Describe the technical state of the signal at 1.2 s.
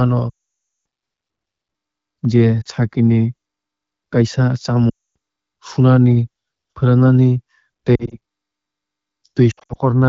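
At 1.2 s the speech is intact, with no fault at that moment, and the AMR wideband (HD Voice) coding at 12.65 kbit/s leaves only the light coloration expected of that codec.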